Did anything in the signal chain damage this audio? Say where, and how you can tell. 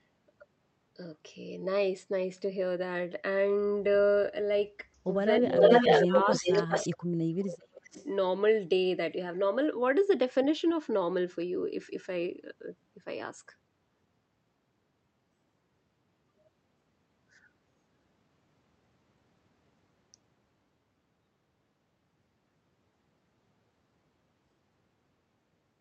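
Yes. The damage happens in call processing. Speech suppressed in double talk dips the level between 5.4 and 5.83 s and between 6.05 and 6.69 s by around 10 dB. From 7.57 to 7.97 s the speech nearly drops out. The likely cause is an echo canceller that could not separate the talker from the loudspeaker echo, so it turned both down.

An echo leak adds a delayed copy of the speech, trailing by about 0.4 s. From 5.42 to 7.04 s it sits slightly louder than the direct speech. Fainter scraps follow at 7.38 to 7.57 s and 7.87 to 8.07 s. Loudspeaker pickup likely got past the far end's echo canceller and was sent back.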